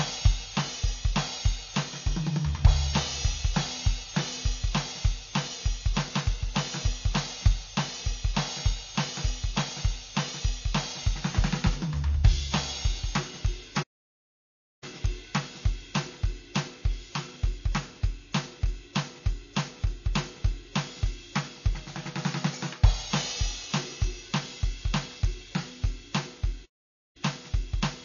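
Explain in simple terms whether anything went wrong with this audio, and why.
Two things went wrong with this music. The whole track has the sound of heavy MP3 compression, most likely from being squeezed into a small file. The encoder didn't have enough data to spend, so it cut off everything above about 7 kHz, which is why the top end sounds dull and missing its sparkle. It also dropped quieter details that flicker in and out, giving that watery, swirly texture and a metallic edge on bright sounds.

There are also two playback stalls, where the sound just stops dead for a moment. The first runs from 13.82 to 14.84 s, about a second of silence, and the second from 26.65 to 27.17 s, about half a second. This is most likely the player running out of data or getting held up, so the output goes quiet until it catches up and carries on.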